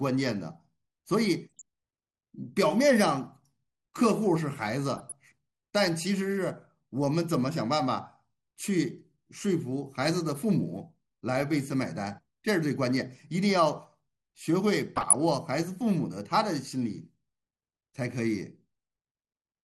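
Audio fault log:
throughout: MP2 compression. The speech sounds dull and narrowed, with a gurgling, grainy roughness, and the top of the spectrum thins and flickers as it comes and goes. The likely cause is MPEG Layer II coding at a low rate, which fits roughly 80 kbps. With so few bits to share among its 32 sub-bands, the coder drops upper bands and quantises the remaining ones coarsely.
1.59–1.62 s, 4.96–5.12 s, 14.96–15.15 s: DAB burbling. Each burst lays brief blips of noise over the speech, and the later two are longer than the first. Bit errors from a weak signal, at a rate of a fraction of a percent, have slipped past error correction into the audio frames. Corrupted samples add noise to single sub-bands and corrupted scale factors throw individual sub-bands to wrong levels frame by frame, which fits a run of several damaged frames each time.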